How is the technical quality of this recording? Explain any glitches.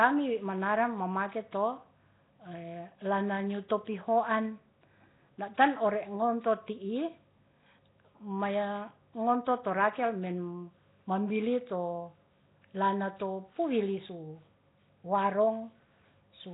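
Poor. Throughout, the speech sounds rough and hissy, smeared and underwater, with nothing above 3.8 kHz, most likely from heavy Nellymoser compression, consistent with about 16 kbps. Starved bands are replaced with noise.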